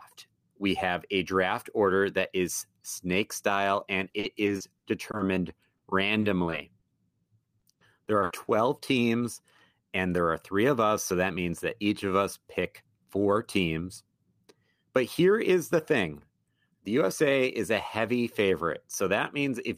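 Between 4.09 and 6.84 s, and again from 7.60 to 8.49 s, the speech shows repeated packet loss with a robotic sound. Lost or late packets leave holes of up to 50 and 60 ms. The receiver patches each one by extending the preceding sound, giving a choppy, robotic texture with fragments missing.

From 15.31 to 16.05 s a jitter buffer speed-up occurs. The receiver trims a few tens of milliseconds in small pitch-period slices to reduce excess buffered delay, so the speech runs at 104% speed with unchanged pitch.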